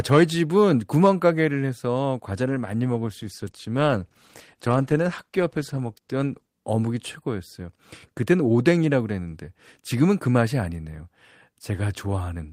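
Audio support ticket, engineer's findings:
Speech turns rough and watery, top end dulled, 2.51 s to 6.55 s; clears afterwards. Call bitrate drop: bandwidth estimate fell, encoder forced to far fewer bits, coarser coding and high-frequency cutoff. Degradation suggests a fall from around 32 to roughly 15 kbps, held about 4 s.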